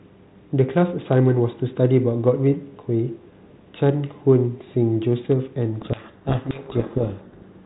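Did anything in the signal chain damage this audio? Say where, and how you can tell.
Yes, at the codec stage. From 5.81 s to the end of the clip at 7.66 s, the speech is buried in harsh, grinding distortion. This is a codec payload misread: the decoder is unpacking G.726 code words with the wrong bit order, so each ADPCM difference value comes out wrong and the prediction drifts. On a spectrogram, the clean harmonic striations give way to dense noise filling everything below 4 kHz. The waveform turns jagged and crowded, and the syllable envelope is barely visible.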